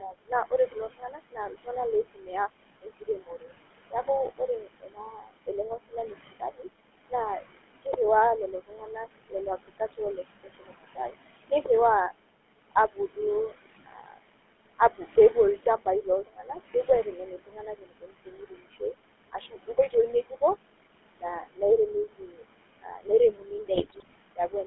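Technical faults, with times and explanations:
Throughout: noise suppressor artifacts. Room noise drops about 21 dB between phrases and returns beneath speech; spectrogram shows pumping noise floor and speckled gaps.
Throughout: GSM full-rate codec. Regular-pulse excitation gives buzzy, gravelly roughness, plainly audible; band limited to 150 Hz–3.4 kHz, fitting a 13 kbps stream, spectrogram empty above 3.4 kHz.
0.00–7.97 s, 8.52–11.68 s, 14.79–20.42 s, 21.21–21.62 s, 22.17–24.67 s: speech cut by the noise suppressor. Quiet consonants and word endings were mistaken for noise and pulled down, by up to about 21 dB (about 17 dB at 21.21 s), roughly seven seconds altogether; they sound swallowed, with waveform tails clipped short.
23.74–24.14 s: GSM bit errors. Corrupted filter, pitch and gain parameters produce squawks, pops and gargling; spectrogram shows smeared, misplaced formants and sudden level spikes frame to frame.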